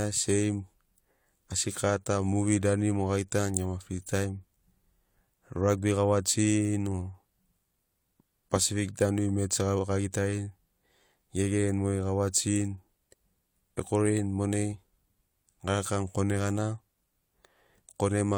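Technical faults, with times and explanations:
No technical faults can be heard anywhere in the speech; the signal holds steady and continuous throughout.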